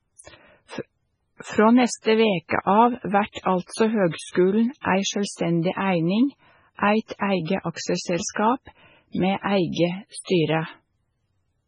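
Throughout, the speech is watery and swirly, with the treble cut off cleanly at 10.6 kHz and faint detail flickering in and out. This is likely heavy MP3 compression, which fits a bitrate near 16 kbps. Unlike plain low-pass filtering, the damage shifts from frame to frame.

Pre-echo appears at 2.48 s, 3.32 s and 8.31 s: a brief hiss of 32, 44 and 53 ms runs ahead of each sharp onset, and the attack itself sounds smeared. It differs from reverb or echo because the noise comes before the attack, not after it.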